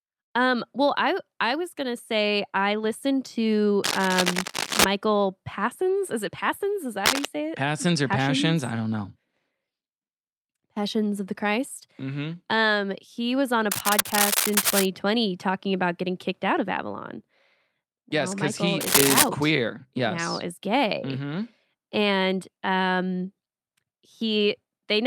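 At 3.84 to 4.85 s, 7.05 to 7.27 s (just before "say it"), 13.71 to 14.87 s (between "he was on a" and "talking about getting kicked") and 18.80 to 19.29 s (after "because he"), bursts of cable scratch noise cut across the speech. These are dense, irregular crackling rustles, roughly as loud as the speech and a little louder in the second and fourth bursts. They likely come from a worn cable or connector being moved, with its contact resistance fluctuating rapidly.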